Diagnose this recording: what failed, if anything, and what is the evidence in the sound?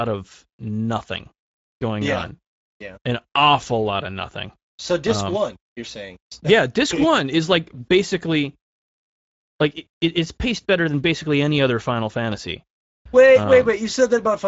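It's the codec. Speex codec damage runs throughout, with noisy, rough speech and nothing above 7.7 kHz. That fits a 17 kbps setting leaving too few bits for excitation.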